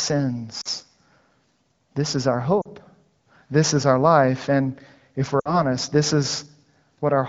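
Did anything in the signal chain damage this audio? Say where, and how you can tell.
Yes. Brief drops to near silence at 0.61–0.68 s, at 2.61–2.67 s just after "is our", and a longer fade at 5.40–5.61 s mark lost AMR speech frames: the radio link corrupted roughly 40–60 ms of data, and the AMR-WB decoder bridged each gap by extrapolating with decaying gain.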